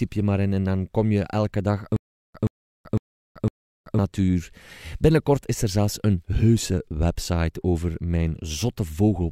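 Stutter with silent gaps runs from 1.96 to 3.99 s, after "kom je elke dag": a 124 ms speech fragment repeats four times, each followed by 382 ms of digital silence, every 505 ms. A stalled stream likely replayed its last fragment at each retry, losing that span's speech.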